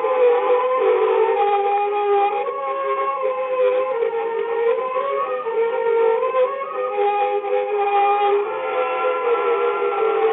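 Nothing stood out on listening; no technical fault could be heard at any point in the audio.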